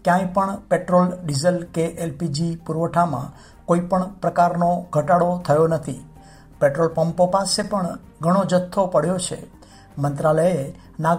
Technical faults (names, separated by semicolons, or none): frames out of order